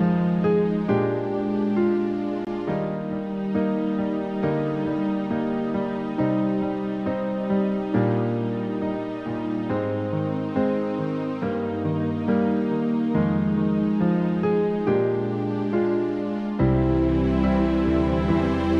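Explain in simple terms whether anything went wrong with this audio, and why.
At about 2.45 to 2.47 seconds, the sound drops out for roughly 21 milliseconds, then picks up exactly where it stopped. This is a gap at a join of encoded pieces. Two separately encoded sections were stuck together, and the silent padding at their edges was never trimmed.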